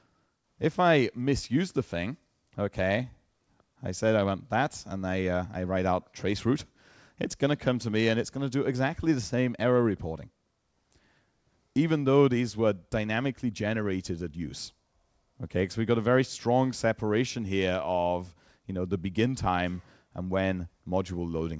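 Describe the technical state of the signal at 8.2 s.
At 8.2 s the signal is intact, carrying only the call path's ordinary band limit, with nothing above 8 kHz.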